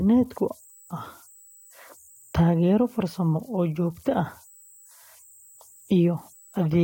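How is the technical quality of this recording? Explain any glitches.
The recording carries converter idle tones from start to finish. A faint high whistle, somewhere around 7 kHz, sits under the speech and stands out in the pauses. Its level is about 31 dB below the signal. During quiet passages it also adds a grainy texture. The cause is a delta-sigma converter running without dither. With a very small input, its bit stream settles into repeating patterns. Those patterns produce the tone.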